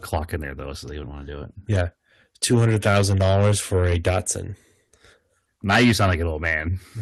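From 5.69 to 6.15 s the input level was likely set too high, so the speech drove the converter about 13 dB past its limit in microphone overload. The tops of the waveform are sheared flat on around 7 percent of samples in that stretch, which adds a crackling, distorted edge to the loudest parts instead of clean peaks.

At 5.76 s, inside that overloaded passage, the call software likely reacted to the clipping by turning the device input down in a single move: microphone volume stepped down by about 4 dB. Speech and background drop together at that instant, an abrupt step in loudness rather than a gradual fade.

Even after that cut, the input was likely still hot enough for a second microphone overload from 6.46 to 6.53 s, this time about 2 dB over. Roughly 1 percent of samples there are clipped, so the distortion returns briefly on that peak, and the flattened tops still add their crackle. 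Throughout, the audio passes through an Opus call path whose bandwidth stops around 12 kHz.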